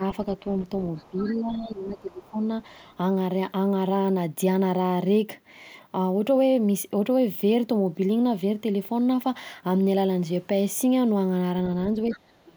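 Speech is suppressed in double talk at 0.0–0.04 s, 1.1–2.39 s, 11.94–12.24 s and 12.43 s to the end. The level dips by roughly 5 dB at first, then by about 15 dB and finally about 30 dB. This is likely an echo canceller turning down the near talker while the far side speaks. The other side's voice leaks through faintly at 0.36–0.8 s, 0.96–1.35 s, 2.86–2.95 s and 12.11–12.17 s, roughly 20 to 40 dB below the speech. That points to an echo canceller that likely left residual loudspeaker echo in the microphone signal.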